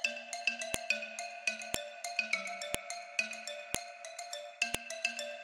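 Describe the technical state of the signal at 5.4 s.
At 5.4 s the signal is intact, with no audible dropout, distortion or other fault at that point.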